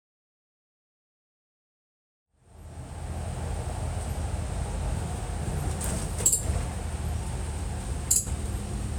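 No technical faults are audible in these sounds.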